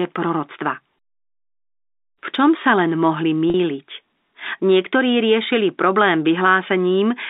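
At 3.50 s the speech drops out for 40 ms, until 3.54 s. This is packet loss with pitch repetition. The receiver bridges the gap by repeating the last pitch period. The sound holds on a slightly buzzy tone. The gap fits two lost packets.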